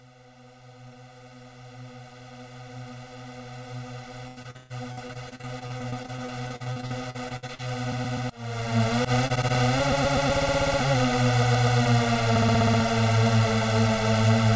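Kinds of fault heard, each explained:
Channel delay (comb filtering): One channel reaches the mix about a millisecond and a half behind the other, and the two are summed to mono. Content common to both channels cancels at a series of evenly spaced frequencies, starting around 300 Hz and repeating up the band. Throughout the clip this gives the sound a hollow, phasey colour, with fixed notches that stay put however the material changes.
Repeated packet loss (robotic sound): Between 4.28 and 7.68 s, packets kept going missing or arriving too late. The receiver covered each hole by stretching the last stretch of sound it had, and the next hole followed soon after. The result is choppy, with pieces missing and close to a third of that span patched over, about a second in all, and the longest single dropout reaching 133 ms.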